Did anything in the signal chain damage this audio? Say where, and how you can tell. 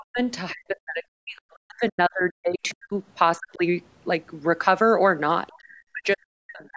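Yes. The damage happens in call processing, at the echo canceller. There is speech suppressed in double talk at 0.00–0.19 s, 0.52–2.93 s, 3.38–3.63 s, and from 5.58 s to the end. In these stretches the talker drops sharply, by around 40 dB at worst. The likely cause is that the far end was talking at the same time. The canceller could not tell the talker from its own loudspeaker echo, so it pulled both down.

The same stage also lets the other side's voice leak through. You hear faint scraps of a second voice at 1.37–1.55 s, 2.69–2.74 s and 5.47–5.58 s. They sit very low, roughly 30 to 35 dB under the talker. They are short. They likely come from the loudspeaker playback reaching the microphone, where the canceller left some residue. The last scrap ends just as the final suppression begins.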